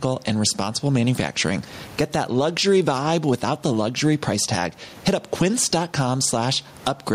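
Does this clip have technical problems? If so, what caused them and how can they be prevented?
Yes. Gain pumping runs through the whole speech clip: the level audibly rises and falls by around 15 dB, squashing loud and quiet parts closer together, while the room noise stays about 37 dB below the speech. The likely cause is input gain set far too high, with a fast limiter or compressor pulling it down on each loud sound. To prevent it, lower the microphone gain so loud passages no longer drive the limiter.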